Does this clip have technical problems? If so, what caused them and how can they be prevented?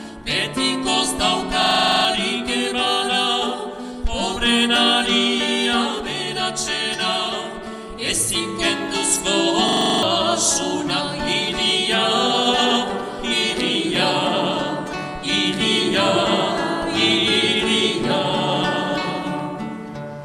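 Yes. System hang loops occur at 1.62–2.05 s and 9.69–10.03 s. The system stalled while the sound hardware kept replaying its ring buffer, so one 42.67 ms slice, which fits a 2048-sample buffer, repeats ten and then eight times as a 23.4 Hz stutter. Giving the audio thread real-time priority and using stable drivers prevents this.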